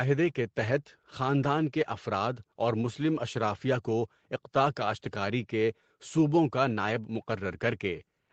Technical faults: none

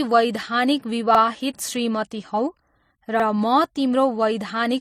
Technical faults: transcoding between lossy codecs; overlapping chunks

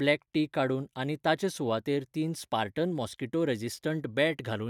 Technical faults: none

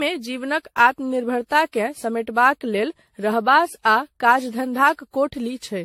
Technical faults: generation loss

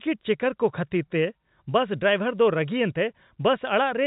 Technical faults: none

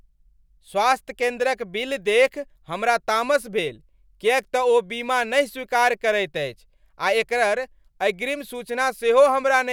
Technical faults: none

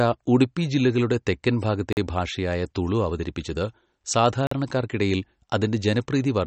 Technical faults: MP3 compression; gap between chunks

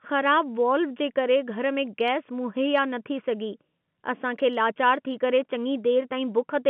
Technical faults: none

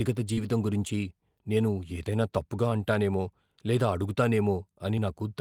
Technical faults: short concealed packet loss

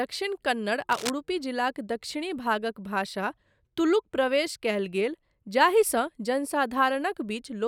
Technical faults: cable scratch noise

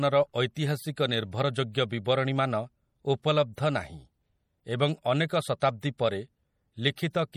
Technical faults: MP3 compression; pre-echo

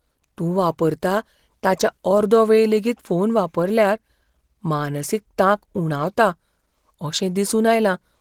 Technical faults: Opus compression

